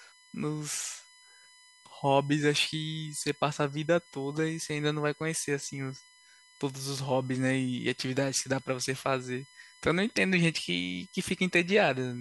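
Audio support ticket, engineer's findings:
USB whine, present throughout. Bus current drawn in 1 ms frames leaks into the audio path via power or ground. Result: fixed-pitch whine at 1 kHz, strongest at its 2 kHz harmonic, sitting roughly 30 dB under the speech. Probable component: USB interface or shared supply/ground. Suspect grounding or power filtering.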